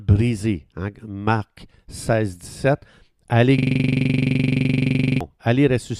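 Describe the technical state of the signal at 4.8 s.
The signal at 4.8 s is frozen in a system hang loop running from 3.58 s to 5.21 s. A stalled driver left the hardware replaying one 42.7 ms chunk, which fits a 2048-sample buffer. It repeats 38 times as a rough 23.4 Hz stutter-buzz, and about one and a half seconds of real audio are lost.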